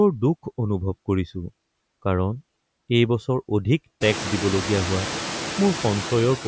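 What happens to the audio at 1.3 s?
Between 1.28 and 1.30 s there's a repeated buffer: new audio arrived late, so the last 20 ms piece played once more, giving a quick hard-edged stutter or click. The noise suppressor artifacts run through here as well, pulling steady background down by about 21 dB, so the leftover noise dips between the words and rises under them.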